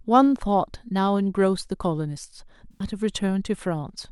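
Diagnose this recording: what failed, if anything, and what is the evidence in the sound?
The failure is at the codec stage: AAC frame loss with concealment. From 2.72 s to 2.84 s, about 85 ms of the speech turns into a smeared, noisy and phasey patch rather than a clean dropout. That length points to roughly four lost AAC frames. With no real data for that stretch, the decoder rebuilt it from the last good spectrum, reusing its energy with randomised phase. The result is the blurred texture, not silence.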